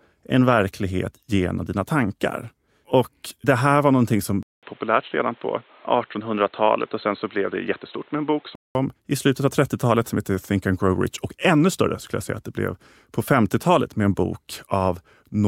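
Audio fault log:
4.43 to 8.75 s, input switched to a poorer device: the recording most likely changed over to a lesser microphone or a headset's call profile, then returned. A 200 ms silence marks the switch. The speech then loses everything above 4.2 kHz and turns dull and boxy at much the same loudness, with a faint new background noise sitting far below it. At 8.75 s the full, brighter sound comes back.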